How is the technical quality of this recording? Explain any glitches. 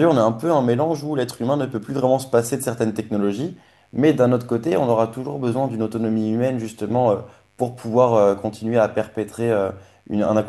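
The recording has one technical fault, a mains buzz that runs throughout the speech. Spikes from switching or poor shielding enter twice in every cycle of the 50 Hz mains, producing a steady, raspy buzz about 40 dB below the speech. On a spectrogram it appears as evenly spaced horizontal lines at multiples of 50 Hz, climbing into the kilohertz range.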